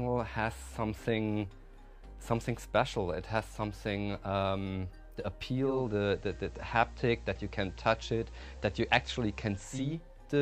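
From 5.54 s to 10.02 s the receiver shows digital radio blending to analogue: losing the digital stream, it cross-fades over 0.4 s to the station's FM broadcast, bringing hiss around 35 dB below the signal and a level shift of about 1 dB, then blends back.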